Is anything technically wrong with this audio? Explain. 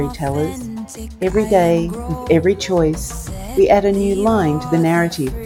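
No, nothing in this audio indicates a technical fault.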